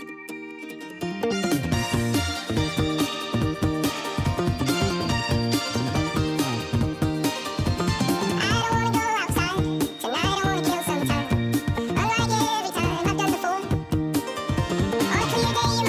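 Throughout the clip a wrong sample rate is audible: everything runs twice as fast and sits a full octave (12 semitones) higher, which fits 16 kHz material played at 32 kHz. Unlike a pitch shift or time-stretch, speed and pitch move together by the same ratio.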